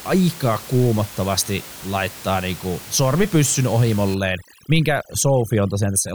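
From 4.15 s to the end, just after "kuumottavasti laittaa niinku sormipyssyn", overdone noise removal suppresses bands near the noise estimate, leaving a lowered, twinkling background.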